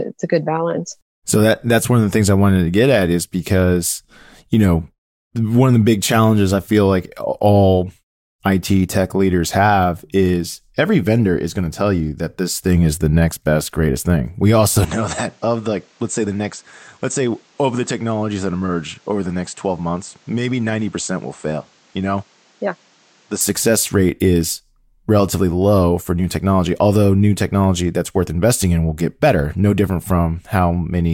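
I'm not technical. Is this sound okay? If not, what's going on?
No. From about 14.85 to 23.41 seconds, the recording likely switched its input to a poorer device, such as another microphone or a headset. During that stretch the speech turns duller, losing its crisp top end, becomes somewhat quieter, and carries a faint new background noise. The change happens instantly, with no gap, just before "success rate is relatively", and the original, clearer sound returns at about 23.41 seconds.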